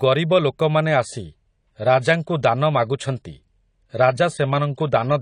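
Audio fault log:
0.91–5.21 s, adaptive stream at a lower bitrate: after "ଗରିବ ଲୋକମାନେ" the player switches to a leaner encoding, so treble abruptly vanishes above 10 kHz, with no gap.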